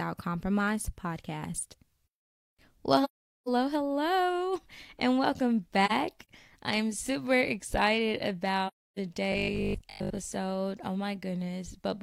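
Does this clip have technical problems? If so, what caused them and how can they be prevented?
Yes. The speech drops out three times in soft-edged holes that fade down and back up, which is AAC frame loss with muting. The first gap runs from 3.04 to 3.49 s, just before "hello and welcome", and lasts about 0.43 s. The second, from 5.85 to 6.29 s between "hello and welcome" and "I'm super excited", is a scatter of brief dropouts totalling about 85 ms, none longer than roughly 40 ms. The third, from 8.67 to 8.99 s just after "I'm super excited", lasts about 0.3 s. Whole frames were lost in transmission, and the decoder filled them with silence, so the overlapping transform windows fade the sound smoothly out and in. Forward error correction, retransmission, or decoder concealment that extrapolates from neighbouring frames would prevent these holes.

From 9.32 to 10.20 s the sound turns into a rigid, metallic buzz at 50 Hz that only loosely tracks the speech. 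This is robotic sound from repeated short buffers. Audio was likely arriving too slowly, so playback kept looping the last 20 ms, which fits a 20 ms buffer and sets the 50 Hz pitch. Most of that stretch, roughly 70 percent, is repetition rather than new audio. A larger jitter buffer or a steadier delivery path would prevent it.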